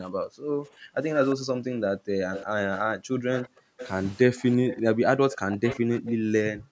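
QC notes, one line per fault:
throughout, speech suppressed in double talk: the talker's level repeatedly sinks, by around 40 dB at worst and for about five seconds in total, likely because an echo canceller clamped down while both sides spoke. The waveform shows gouged, uneven envelopes, and the spectrogram shows energy thinning or vanishing in patches.
1.30–1.35 s, 2.33–2.80 s, 3.33–3.91 s, 4.68–6.15 s, echo leak: a faint copy of the speech trails it by 353 ms, likely from a loudspeaker echo the canceller failed to remove. The copy is about 20 dB down in the brief first scrap and roughly 10 to 15 dB down in the longer ones. On the spectrogram, fainter duplicated harmonic patterns sit shifted right of the originals, topping out with the call band below 8 kHz.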